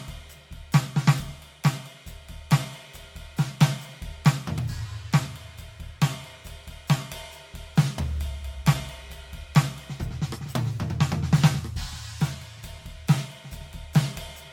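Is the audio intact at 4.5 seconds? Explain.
No. At 4.5 seconds, as throughout the music, the sound is swirly, smeared and hollow, attacks blur, and nothing reaches above 17.1 kHz. This is likely generation loss: around five lossy re-encodes, fitting a 96 kbit/s AAC-LC chain, each requantising on a shifted frame grid.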